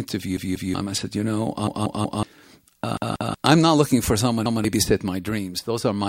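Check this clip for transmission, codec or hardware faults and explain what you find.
Audio failed to reach the playback device in time on four occasions, causing a repeated buffer fault. Each time the device replayed its last 0.19 s block, which fits an 8192-sample buffer. This happened at 0.37 to 0.74 s before "I said you know", at 1.67 to 2.23 s, at 2.97 to 3.34 s before "I'm not looking for", and at 4.46 to 4.64 s after "not looking for someone". Each is a stutter where the same fragment sounds two to four times with hard joins, and roughly 200 to 500 ms of speech is lost.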